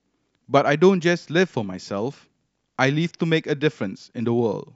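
No technical faults can be heard anywhere in the recording; the speech signal stays steady and intact for its whole duration.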